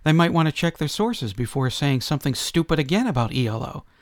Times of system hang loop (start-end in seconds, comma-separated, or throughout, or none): none